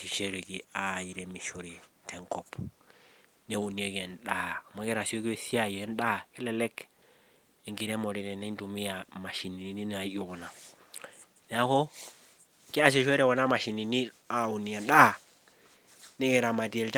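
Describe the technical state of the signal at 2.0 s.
At 2.0 s the speech signal is intact, with no audible technical fault at that moment.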